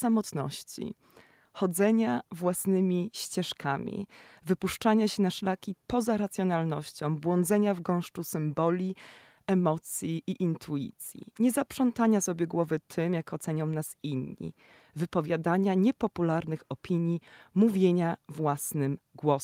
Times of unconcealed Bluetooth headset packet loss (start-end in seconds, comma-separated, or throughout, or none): none